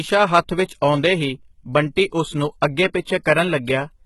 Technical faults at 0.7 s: HE-AAC compression; pre-echo

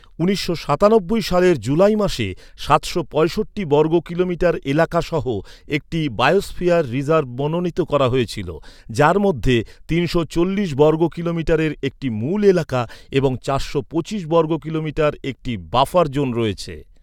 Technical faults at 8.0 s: none

